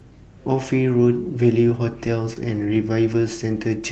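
Lost packet rebuilt from error correction, first at 2.05–2.07 s: a 20 ms packet went missing, and the decoder played the low-bitrate copy carried in the next packet, so there is no gap, only a briefly rougher, noisier frame.

Short concealed packet loss, at 2.33–2.38 s: about 20 ms never arrived in time. The receiver extended the preceding sound for roughly 22 ms before blending back, heard as a short smear or wobble. Inside this span, at 2.36–2.38 s, the final 20 ms was rebuilt from the error-correction copy.

The same error-correction rebuilds recur at 2.56–2.58 s, 2.62–2.64 s, 2.76–2.78 s, 3.12–3.14 s and 3.72–3.74 s. Each is a grainy 20 ms patch within the Opus call audio, whose content stops at about 8 kHz.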